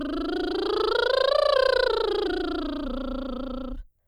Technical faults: none

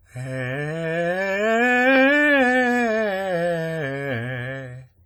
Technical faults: WMA compression

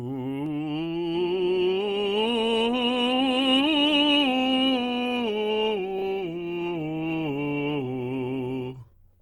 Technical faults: adaptive stream at a lower bitrate

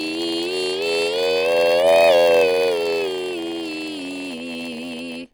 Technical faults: MP3 compression; block size mismatch (padded)

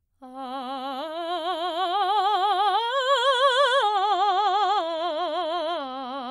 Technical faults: adaptive stream at a lower bitrate

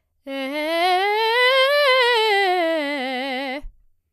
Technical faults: none

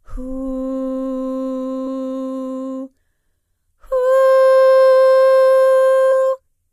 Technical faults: damaged data in a compressed stream

